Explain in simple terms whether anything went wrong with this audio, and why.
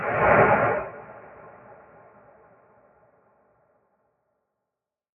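A noise suppressor applied to music or sounds is active across the whole clip. Made for speech, it treats steady sound and fading tails as noise and turns them down by a wide margin. Unlike dropouts, sharp beginnings of sounds still come through.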